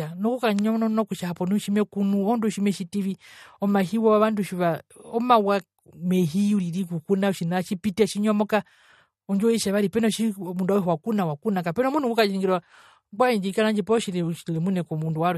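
From start to finish the speech carries plainly audible damage, likely from MP3 compression at a low bitrate, around 48 kbps. Nothing is heard above about 13.2 kHz. The treble stops at a fixed ceiling. The encoder runs short of bits and drops weak frequency content. That content flickers on and off between frames. The result is a watery, swirling texture. S sounds turn metallic and chirpy. Consonant attacks smear.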